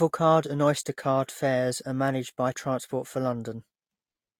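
Throughout, the speech sounds swirly and hollow with blurred attacks, likely generation loss from about three re-encodes; the spectrogram shows patchy holes and nothing above 18.8 kHz.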